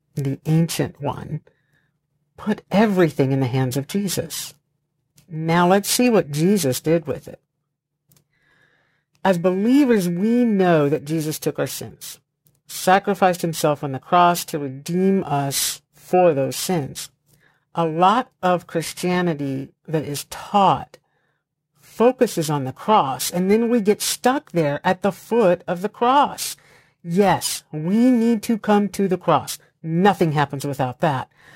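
Periodic clock jitter runs through the whole speech recording: the converter clock is being wobbled at around 2 kHz, so each component of the speech carries sidebands about 2 kHz either side. That adds a rough, metallic edge to sibilants and brighter sounds, which disappears during pauses.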